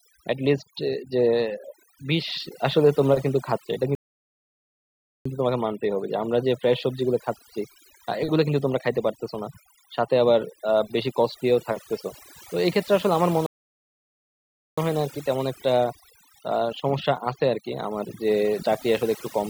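Across the whole speech clip there is overdone noise removal. A noise reducer set far too aggressively has pulled individual frequency bands down to nothing wherever they sat close to its noise estimate, taking the softer parts of the voice with them. The background collapses to near silence flecked with twinkling, chirpy specks. Unlike a simple low-pass or a lossy codec, this thinning tracks the level of each band moment to moment.

At 3.95 s the sound halts outright and stays silent until 5.26 s, a gap of about 1.30 s. The same thing happens from 13.46 s to 14.78 s, about 1.31 s. These are playback stalls, most likely the player running dry of data or its thread being blocked.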